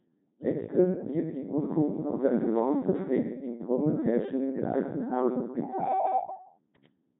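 Channel delay (comb filtering) runs throughout this speech clip: one channel lags by a fraction of a millisecond, so the mono sum cancels near 3 kHz and sounds hollow. A Codec 2 vocoder, also throughout, rebuilds the voice from pitch and envelope as buzzy, robotic speech with nothing above 3.7 kHz, which fits a heavily damaging 2.4 kbit/s mode.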